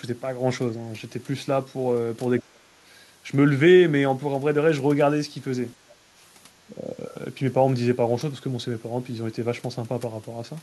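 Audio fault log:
2.40–2.65 s, 5.83–6.01 s, 6.72–7.01 s: speech suppressed in double talk. The speech dips for a fraction of a second each time, by about 30 dB, then about 20 dB, then only slightly. This is likely an echo canceller confusing the talker with far-end echo during overlap and attenuating both.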